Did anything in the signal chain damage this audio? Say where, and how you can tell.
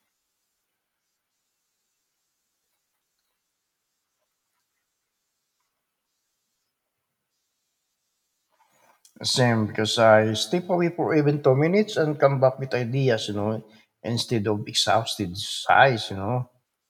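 No, no damage is audible.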